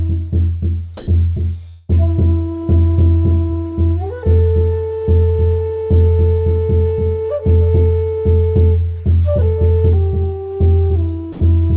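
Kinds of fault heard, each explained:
Comfort noise in place of the background: From 0.97 to 1.07 s, the real background, sitting about 23 dB below the loud parts, gives way to a smooth, featureless hiss for about 100 ms, and the level shifts by about 5 dB as it swaps in. That's likely the sender's voice detector deciding nothing was worth sending, so the receiver painted in synthetic noise roughly matching the background's shape, losing all its texture.
Long network dropout: Between 1.68 and 1.90 s, about 200 ms of audio never turns up, and you can hear the receiver stretching the last bit of sound across the whole gap as a smeared, buzzy continuation rather than falling silent. When things pick up again, that chunk is simply gone. Likely packets went missing in transit and the jitter buffer's concealment had to cover the entire hole.
Sound dropped by the voice detector: Right near the end, from 11.32 to 11.40 s, about 80 ms of real sound is swapped for steady comfort noise, so the tail gets clipped into flat hiss. 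Likely the detector mistook that sound for background and stopped transmitting, and the receiver filled in. It's all heard through a narrowband G.711 A-law path at 64 kbps, with nothing above 4 kHz.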